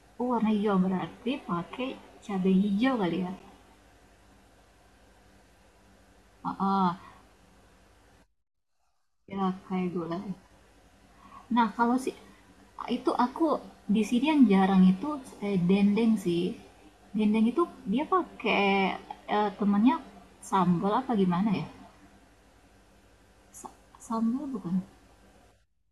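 At 3.39 s a brief hard-edged silent hole cuts into the speech: a gap between stream segments, where mismatched timestamps at a 6 s segment boundary left roughly 11 ms filled with silence.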